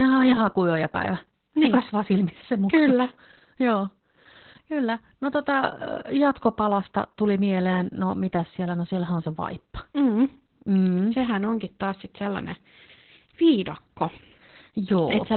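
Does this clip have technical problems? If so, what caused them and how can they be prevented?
Yes. Opus voice compression affects the whole clip. The speech is cut off above 4.3 kHz, which shows as an empty upper band on a spectrogram, and coarse SILK coding leaves it muffled, hoarse and slightly robotic, consistent with narrowband Opus near 8 kbps. Encoding at a higher bitrate prevents this.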